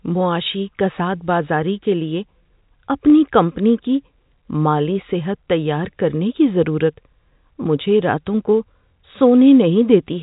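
At 3.1 s, just before "کمپنی کی", there is packet loss with the last packet repeated. About 20 ms of audio went missing, which fits a single lost 20 ms packet, and the receiver filled the hole by replaying the packet it had just played. As a single repeat, it comes across as a small blip. This happens under the G.711 telephone band.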